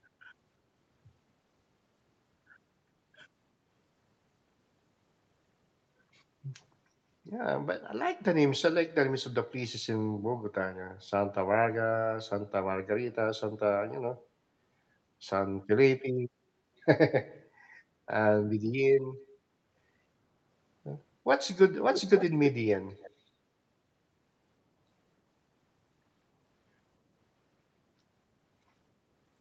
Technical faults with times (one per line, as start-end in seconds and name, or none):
21.91-22.31 echo leak
23.00-23.10 echo leak